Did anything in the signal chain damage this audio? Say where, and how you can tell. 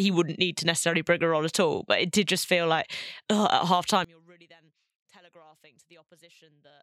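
Yes. One channel inverted, from 4.05 s to the end, right after "feel like ugh at": the speech collapses by about 30 dB into a faint residue. That sudden drop, with only a faint trace left rather than a fade or dropout, is what summing two nearly identical channels of opposite sign sounds like. The likely cause is reversed polarity on one leg at the analogue wiring stage, feeding a mono sum.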